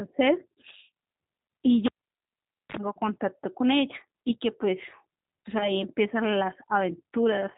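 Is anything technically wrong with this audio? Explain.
Yes, there are three problems.

Throughout, the speech sounds slightly rough and synthetic, dull with nothing above 4 kHz. That is G.729 codec damage: each 10 ms frame is rebuilt from a vocal tract filter, a pitch predictor and a few pulses, which fits an 8 kbit/s VoIP link.

From 1.86 to 2.77 s there is a pop, then near silence for about 0.86 s, a brief 47 ms burst of 50 Hz mains buzz, and a second pop as the sound returns. This is a cable pulled and plugged in: the live lead was removed, and hum leaked in while only the plug tip made contact.

From 5.58 to 5.77 s the speech smears into a fading, buzzy tone or coloured noise and stays weak for a moment afterwards. This is VoIP packet loss concealed by the speech codec. About 20 ms of audio went missing, which fits two lost frames. The decoder extrapolated from its last pitch and filter at falling gain, and because each frame builds on the previous one, recovery lagged behind the returning packets.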